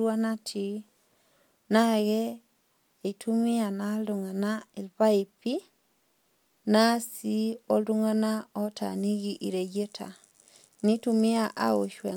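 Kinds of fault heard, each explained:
No faults detected in the speech: nothing audible warrants a fault entry.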